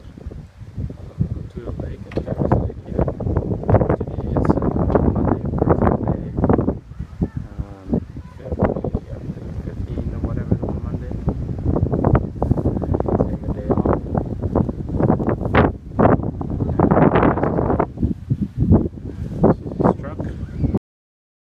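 The audio has a cut-off end: at 20.78 s the sound stops mid-event and the remaining 0.63 s is digital silence. The final buffers were never written or played back, so the signal simply ends rather than finishing. What separates this from a deliberate fade-out or a natural ending is the absence of any decay or reverberant tail. The level does not taper at all; it falls straight from active sound to nothing.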